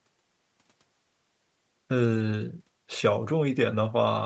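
Speech, with no technical faults to report. Nothing is heard above 8 kHz and the lowest bass is trimmed, which fits ordinary call microphone processing and a call codec such as Opus running at a moderate bitrate, with its usual coding noise.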